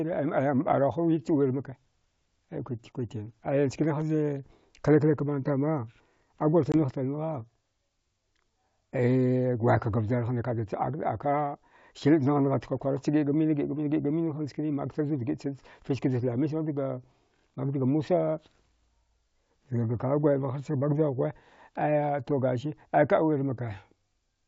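At 6.72 to 6.75 s, packet loss on an ADPCM call leaves a hard-edged 20 ms silence. Unlike a clean dropout, the speech returns briefly disturbed while the decoder's predictor and step size catch up.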